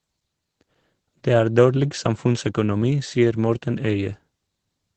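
Opus voice compression runs throughout: SILK coding, likely near 12 kbps, leaves the speech muffled and hoarse, with a spectrogram showing nothing above 8.9 kHz.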